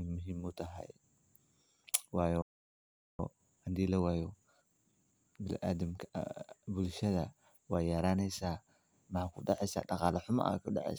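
At 2.42 s the player most likely ran out of buffered data, or its playback thread was held up, and it had nothing to send to the output. That is a playback stall: the speech cuts off in mid-flow and the output sits silent for about 0.77 s, until 3.19 s. It then resumes rather than simply picking up as though nothing had happened, because the delay has left a backlog to clear.

From 3.19 s to 6.19 s the player works off that backlog with time-compressed catch-up. It trims small slices out of the audio and cross-fades across each join, so the speech runs at roughly 1.15 times its normal rate while the pitch stays where it was. The result sounds hurried rather than sped up like a tape until normal pacing returns at 6.19 s.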